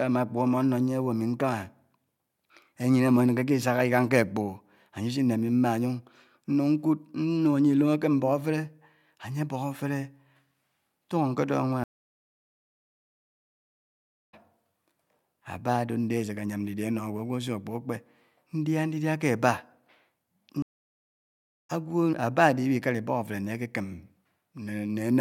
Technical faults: stream reconnect

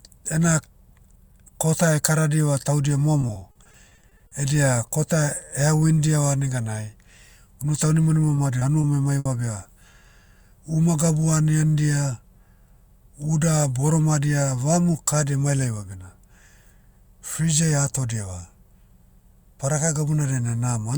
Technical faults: repeated packet loss (robotic sound); short concealed packet loss

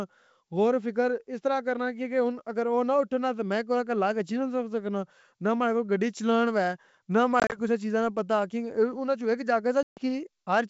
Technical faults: packet loss on an ADPCM call

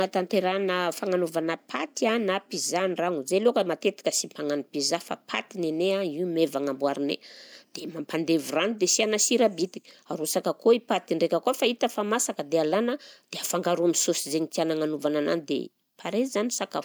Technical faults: none

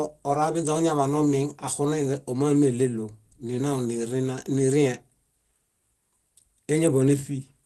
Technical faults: none

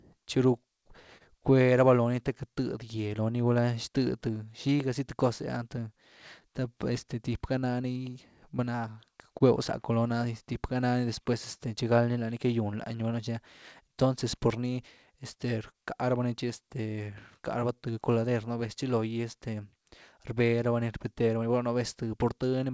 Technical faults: clock drift between sender and receiver; repeated timing corrections; scattered short gaps; short stall from a late packet

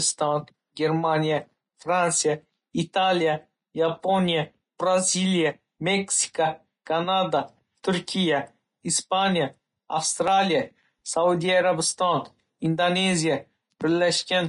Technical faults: Vorbis compression; pre-echo; dropped buffer (overrun)

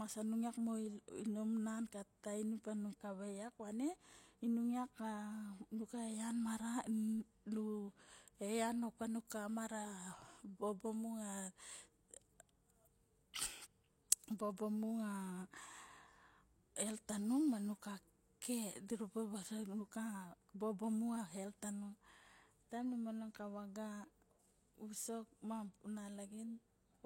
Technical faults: pre-echo

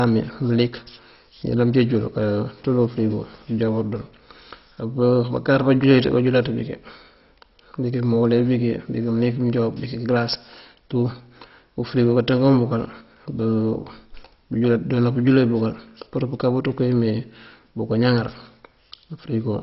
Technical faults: MP2 compression

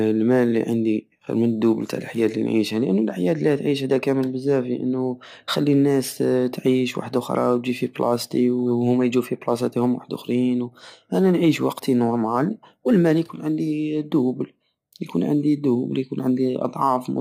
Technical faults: none

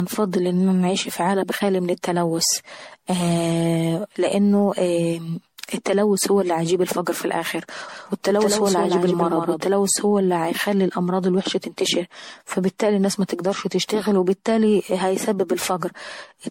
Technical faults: generation loss; doubled audio track

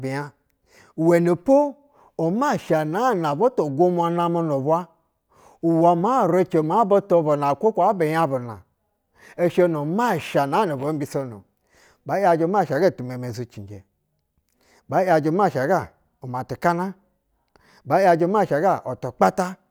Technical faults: none

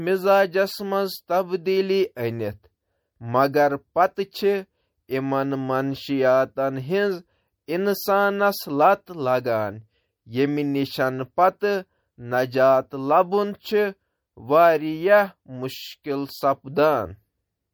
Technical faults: MP3 compression

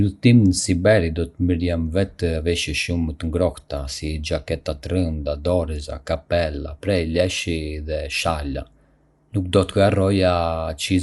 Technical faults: Dolby Digital compression

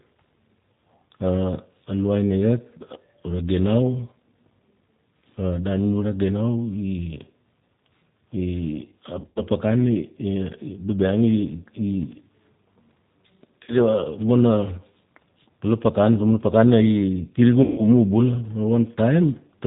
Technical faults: G.729 codec; VoIP packet loss concealed by the speech codec

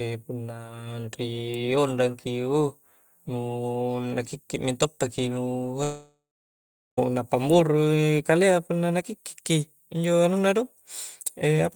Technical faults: long network dropout

